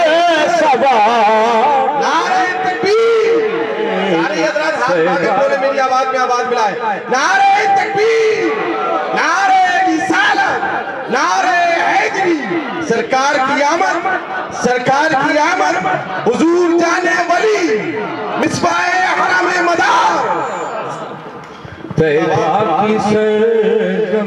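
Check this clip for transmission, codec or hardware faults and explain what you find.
Two brief discontinuities stand out, each a sudden jump forward in the sound.

Dropped buffer (overrun), at 13.78 s and 18.43 s: a likely cause is samples being overwritten before capture read them, so roughly 20 ms vanishes each time and the surrounding audio butts together with no gap.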